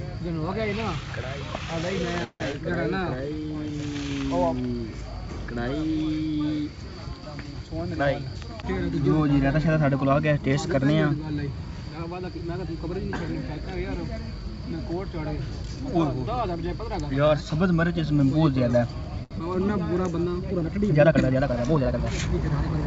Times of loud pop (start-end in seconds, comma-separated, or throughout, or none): none